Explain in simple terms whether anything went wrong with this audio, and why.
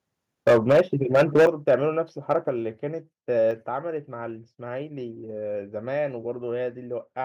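The loudest syllables between 0.47 and 0.81 s, 1.14 and 1.75 s, and briefly at 2.31 to 2.36 s sound harsh and crackly. This is microphone overload. The input was likely set too high, so the tops of the loudest peaks were cut off flat.

The sound then drops suddenly in level, voice and background together, at 0.48 s, 1.47 s and 2.49 s, each time just after distortion. This is the microphone volume being stepped down, likely by the call software reacting to the overload and lowering the input in one jump.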